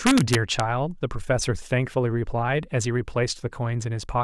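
Integer overflow from 0.07 to 0.6 s: speech peaks driven about 2 dB past full scale wrap to the opposite sign instead of limiting, producing harsh, violent cracks.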